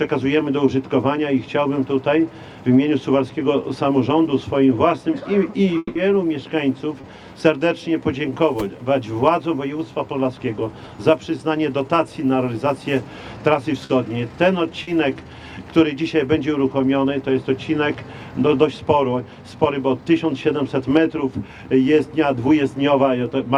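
At 5.77 s the sound trails off into a fading buzz for about 180 ms, then 20 ms of silence, resuming at 5.97 s with that stretch missing, likely a long network dropout. Short concealed packet loss follows at 7.01, 13.85 and 14.83 s: 20 to 40 ms holes patched by continuing the previous sound, heard as quick smears or wobbles.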